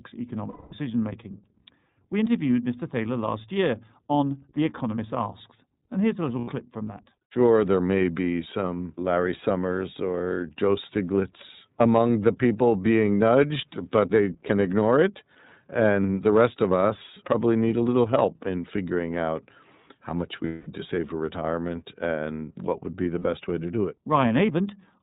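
Throughout, the iLBC codec band-limits the speech below 4 kHz. It sounds rough and synthetic. The coarseness suggests roughly 13 kbps in 30 ms frames.

Lost iLBC frames leave gaps at 0.50 to 0.73 s, 6.39 to 6.49 s, 20.46 to 20.67 s and 23.19 to 23.26 s. The decoder repeats the last pitch cycle with noise. Each gap sounds like a held, buzzy vowel, and the voice returns at once.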